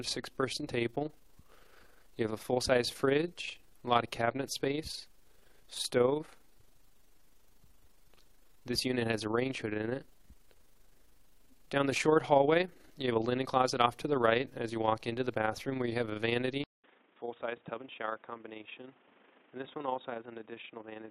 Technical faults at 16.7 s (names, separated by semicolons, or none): overlap-add ripple; input switched to a poorer device